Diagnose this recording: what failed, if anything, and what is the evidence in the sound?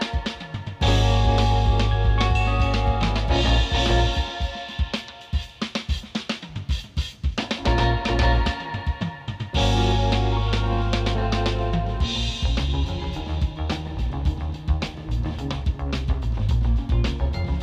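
Nothing failed; no faults detected.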